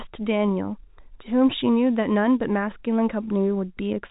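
Nothing's wrong with this speech clip; it just has the narrow band of ordinary G.711 telephone coding, with nothing above about 3.8 kHz.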